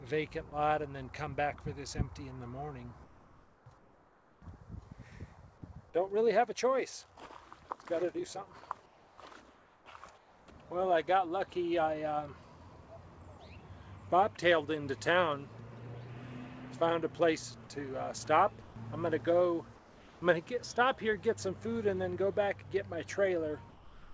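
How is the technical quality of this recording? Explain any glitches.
The recording has repeated transmission gaps in which real sound is replaced by flat synthetic noise, and nothing appears above 8 kHz.

Sound dropped by the voice detector at 0.5 s, 18.62–18.76 s and 23.70 s to the end. The detector likely mistook sound for background and cut it, leaving smooth, featureless noise bands on the spectrogram.

Comfort noise in place of the background at 3.04–4.42, 8.86–9.18, 9.54–9.86, 10.18–10.48 and 19.76–20.22 s, likely from discontinuous transmission. The detailed background becomes uniform hiss, about 3 dB quieter in the last four, visible as flat waveform stretches.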